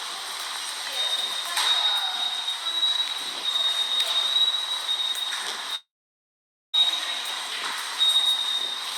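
A recording of everyday sounds carries two faults. From 3.25 s to 7.78 s a train of clicks runs over the material at a regular 10.2 clicks per second, around fifty in all, each peaking at roughly the level of the sound itself. They are near-identical pulses, audible as steady ticking through both busy and quiet passages. The likely cause is periodic interference from nearby equipment or a faulty connection or power supply. Overlapping that span, a long network dropout begins at 5.75 s and ends at 6.75 s, with 0.98 s of audio missing. The receiver briefly extends the last sound as a decaying buzz or hiss, then leaves about 0.86 s of silence before playback resumes at 6.75 s, with the lost section simply absent. This is likely a stall in packet delivery that outlasted the receiver's concealment.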